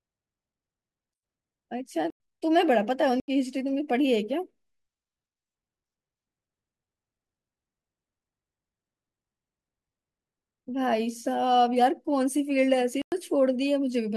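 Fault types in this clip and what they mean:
Block of digital silence: stretches of output samples were replaced with zeros at 2.10, 3.20 and 13.02 s, lasting about 98, 80 and 104 ms. The speech cuts abruptly to dead silence and back without any fade, leaving each short hole.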